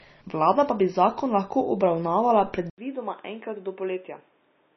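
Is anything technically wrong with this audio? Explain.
Yes, there are two faults. Throughout, heavy MP3 compression, likely at a low bitrate near 24 kbps, removes everything above 5.9 kHz and makes weak components flicker, so the speech sounds watery. A spectrogram shows a hard ceiling and patchy holes.

From 2.70 s to the end, the input likely switched to a poorer device. After an 80 ms silence, the band narrows to 3.7 kHz, the level drops about 5 dB, and new noise sits about 35 dB below the signal, so the sound turns dull and boxy. The waveform shows a gap and then shrinks, and the spectrogram's ceiling falls.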